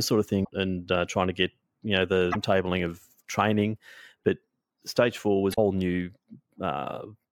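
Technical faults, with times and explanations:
0.41–0.50 s, 2.29–2.36 s and 5.50–5.58 s, damaged data in a compressed stream: three short bursts of corrupted sound, after "sort of", after "to get you know", and after "stage four". Bad bytes in the stream make the decoder misread frames and lose sync while hunting for the next valid header. On a spectrogram each burst is a brief smear of broadband or tonal energy unrelated to the surrounding speech harmonics. On the waveform it appears as an abrupt discontinuity.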